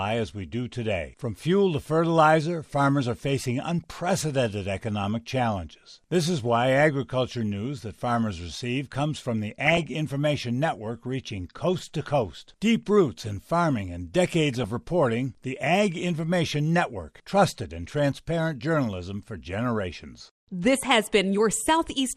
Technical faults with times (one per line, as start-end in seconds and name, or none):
0.00-22.17 MP2 compression
3.84 DAB burbling
9.65-9.86 DAB burbling
14.53-14.64 DAB burbling